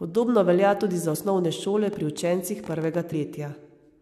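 After "velja tudi za", at 1.14 s, compressed frames are skipped. About 50 ms of speech vanishes, which fits two frames of about 23 ms. From 1.88 to 2.99 s a train of clicks ticks over the speech. There are about ten irregular pops per second, peaking about 5 dB above the voice, likely from electrical interference. At 3.11 s a longer skip drops roughly 150 ms, which fits about seven frames.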